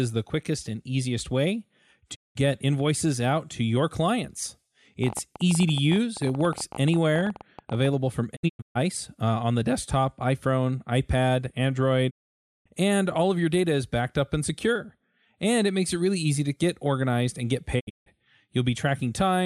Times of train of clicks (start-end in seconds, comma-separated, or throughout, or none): 5.04-7.86